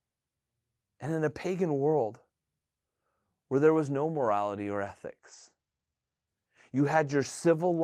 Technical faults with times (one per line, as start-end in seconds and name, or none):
5.23-7.37 call bitrate drop